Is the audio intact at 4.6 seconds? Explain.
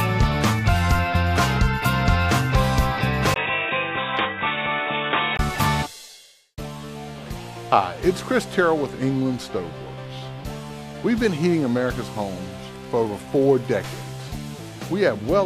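No, from 3.34 to 5.39 s the input likely switched to a poorer device: sound goes dull, nothing above 3.8 kHz, a bit quieter, after a 20 ms gap.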